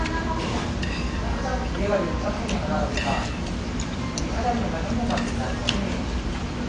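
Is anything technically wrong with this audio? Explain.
Yes. Throughout, the sound is dull and smeared, with nothing above 9.9 kHz and a warbling, fizzy texture, likely from AAC compression at a low bitrate, around 32 kbps.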